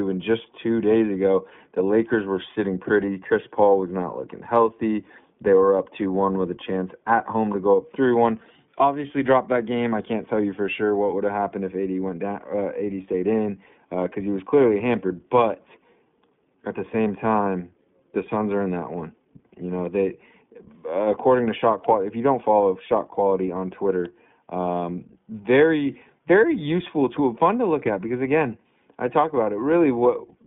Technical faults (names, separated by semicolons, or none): iLBC codec; lost iLBC frames